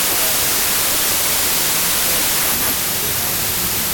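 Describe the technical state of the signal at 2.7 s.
At 2.7 s, as across the whole clip, the speech suffers from a wrong sample width. Data written as 32-bit integers are being read as packed 24-bit, so many values mix bytes from neighbouring samples. The result is loud noise burying speech that plays at 0.75 times speed, lowering the pitch. A simple sample-rate mismatch would shift speed and pitch without that noise.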